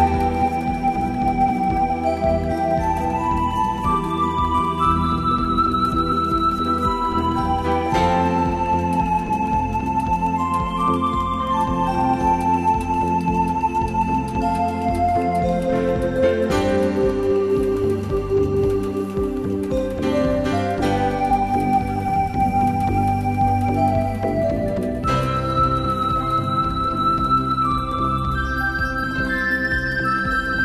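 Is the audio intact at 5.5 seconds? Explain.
Yes, the audio is intact at 5.5 seconds, with no dropout, click or other fault at that moment.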